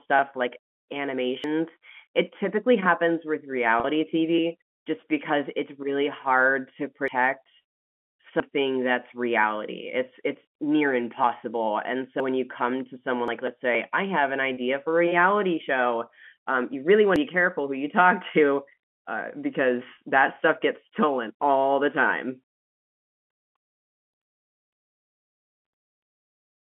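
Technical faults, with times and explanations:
1.44, 7.08, 8.4, 11.24, 12.2, 13.28 and 17.16 s, dropped buffer (overrun): jumps where the audio skips ahead with no gap, losing roughly a tenth of a second at the first three and less later, likely from unread capture buffers being overwritten.
3.80–3.84, 14.54–14.57 and 19.93–20.01 s, packet loss with pitch repetition: brief held, buzzy tones where 40 ms, 30 ms and 50 ms (scattered) were lost and the receiver repeated the last pitch period.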